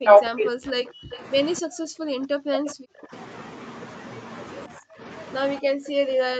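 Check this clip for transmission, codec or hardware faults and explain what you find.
The clip shows three echo-canceller faults: speech suppressed in double talk, background gated by the echo canceller, and a short echo leak. The audio has nothing above 8 kHz, which fits the call's band limit.

Speech suppressed in double talk occurs from 0.0 to 0.54 s and from 2.49 to 2.67 s. The speech dips by around 40 dB. This is likely because the canceller could not tell its own talker from loudspeaker echo while both sides spoke at once, so it attenuated everything.

Background gated by the echo canceller occurs at 0.82–1.11 s, 1.62–2.21 s, 2.95–3.12 s, 4.77–5.01 s, and from 5.6 s to the end. The room sound drops by about 40, 40, 23, 34 and 40 dB respectively. Each time, the canceller clamps the microphone while the loudspeaker plays. In the first four the sound recovers when it releases.

An echo leak follows at 1.11 to 1.19 s. 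A brief copy of the sound returns 262 ms late, roughly 25 dB below the speech. Its likely cause is residual loudspeaker pickup that one side's canceller failed to remove, which was then sent back.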